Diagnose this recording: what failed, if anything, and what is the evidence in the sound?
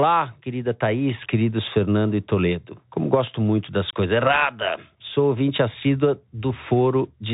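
Codec stage: throughout, a Bluetooth CVSD headset codec cuts everything above 3.8 kHz, and its one-bit up-down steps roughen sibilants and leave granular hiss.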